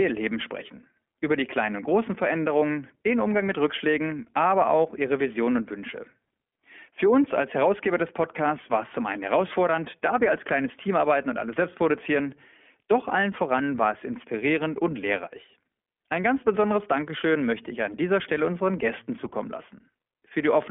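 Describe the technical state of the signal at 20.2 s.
At 20.2 s, as throughout the clip, the iLBC codec restricts the speech to roughly 250 Hz to 3.4 kHz. Its independently coded 20 ms frames leave a plainly audible rough, synthetic edge.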